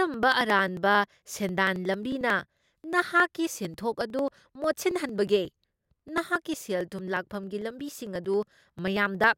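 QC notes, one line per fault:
0.14–9.33 s, periodic USB or driver dropouts: about 10 ms skipped every 0.09 s; waveform splice jumps tick audibly, spectrogram shows evenly spaced vertical lines.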